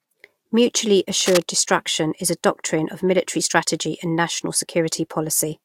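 Speech, with one fault, cable scratch noise. A worn cable, connector or control carrying a DC voltage was likely moved, making its contact resistance jump rapidly, so from 1.20 to 1.42 s dense, uneven scratchy bursts sit over the speech, nearly as loud as it, right before "destruction is a".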